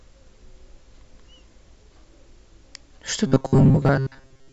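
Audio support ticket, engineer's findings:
Robotic sound from repeated short buffers, 3.27 s to 4.53 s (end of clip). Speech collapses into a rigid metallic buzz near 134 Hz. Likely cause: playback buffer underrun, with a roughly 7.5 ms chunk looped in place of most incoming audio. Waveform: identical short cycles repeating. Spectrogram: flat harmonic comb on 134 Hz, formants smeared.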